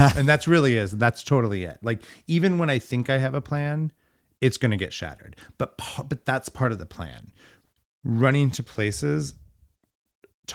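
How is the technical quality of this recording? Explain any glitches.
No glitches can be heard.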